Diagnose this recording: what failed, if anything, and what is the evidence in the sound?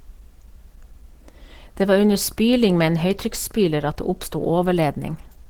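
Codec stage, throughout: the speech sounds hoarse and grainy, likely from Opus compression in hybrid mode near 16 kbps. A spectrogram shows blurred, noise-filled bands up to 20.3 kHz.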